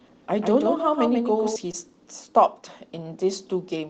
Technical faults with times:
0.00-1.56 doubled audio track
1.71-1.75 short concealed packet loss

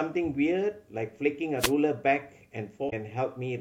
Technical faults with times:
1.58-1.73 wireless microphone noise hit
2.86-2.93 damaged data in a compressed stream

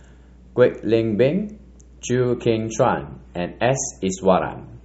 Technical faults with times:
0.00-4.85 mains hum
2.05-4.85 adaptive stream at a lower bitrate

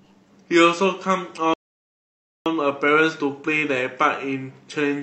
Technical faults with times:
1.54-2.46 rebuffering stall

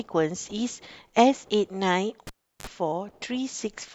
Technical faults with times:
2.27-2.67 cable pulled and plugged in

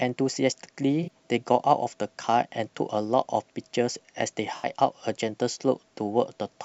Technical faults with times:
1.03-1.09 AAC frame loss with concealment
4.57-4.67 AAC frame loss with concealment

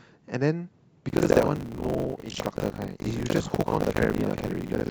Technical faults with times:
1.08-4.91 buffer tearing

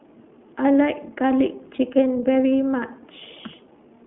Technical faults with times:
0.00-4.07 iLBC codec

